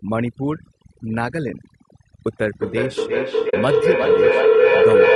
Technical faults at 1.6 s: overdone noise removal; low-delay AAC compression

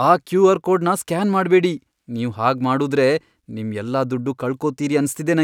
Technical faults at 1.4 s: none

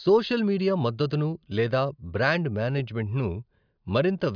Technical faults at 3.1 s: none

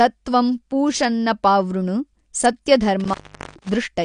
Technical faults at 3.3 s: AAC compression; intermittent contact

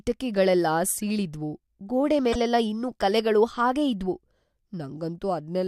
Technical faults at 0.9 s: corrupt frame decoded

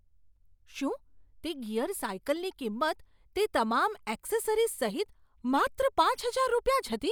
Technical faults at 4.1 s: none

